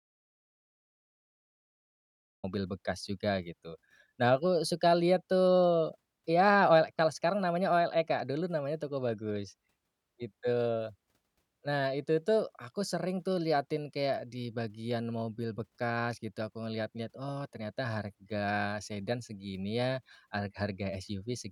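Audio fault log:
0.0 to 2.4 s, audio dropout to silence: the speech clip opens in a gap that is already under way, pure silence with no room tone or hiss beneath it, and the speech only arrives at about 2.4 s, breaking in as if mid-flow rather than starting cleanly. Silence of this kind points to the input being lost while the recorder kept writing, most likely a disconnected device, a failed link or a stray mute, so whatever was said in those first seconds is gone.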